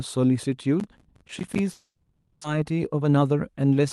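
Speech passed through a call codec whose top end stops near 12 kHz, with three faults in sequence. From 0.80 to 1.59 s a processor overload crackle tears through the sound: about twenty tiny silent gaps, which fits a buffer of around 10 ms, give gritty ticks rather than one clean break. A long network dropout follows from 1.71 to 2.45 s. The sound is stretched into a fading buzz, then about 50 ms of silence. The 400 ms lost are skipped, not merely muted, likely because of a delay jump of roughly 300 ms. From 2.53 to 3.81 s a jitter buffer speed-up plays the speech at 117 % at unchanged pitch, trimming roughly 200 ms, so it sounds hurried rather than chipmunk-like.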